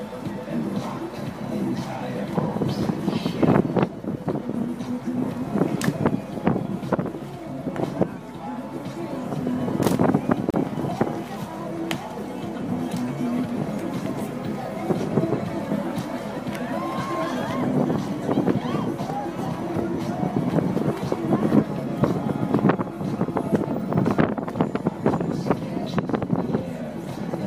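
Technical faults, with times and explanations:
10.50–10.54 s, gap at a join of encoded pieces: a 34 ms gap with smeared edges, left by untrimmed encoder delay and padding where separately encoded sections meet.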